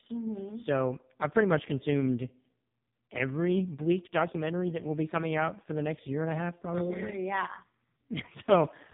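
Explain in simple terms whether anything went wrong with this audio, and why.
Buzzy, thin and robotic throughout, like a bad phone call: the speech was heavily squeezed by the AMR narrowband mobile codec, which drops everything above 3.8 kHz.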